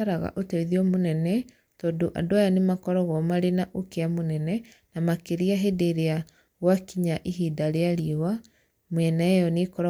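A speech recording with no audible technical faults anywhere in the signal.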